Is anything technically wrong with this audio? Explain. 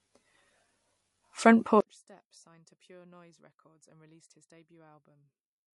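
Yes, there are two problems.

Throughout the clip, the likely cause is MP3 compression at a low bitrate; the damage is consistent with roughly 48 kbps. Short of bits, the encoder discards weaker frequency lines frame by frame and cuts off the top end, so nothing remains above about 11.3 kHz. The codec damage is plainly audible. The speech takes on a watery, swirling quality, sibilants turn metallic and chirpy, and the dulled top end removes the crispness.

From 1.8 s to the end, the sound drops by about 32 dB, and the cause is consistent with one channel inverted. When a stereo signal with one channel's polarity reversed is folded to mono, the material shared by both sides cancels. Only the small difference between the two channels survives, so for the rest of the clip the speech is reduced to a distant residue well below its earlier level.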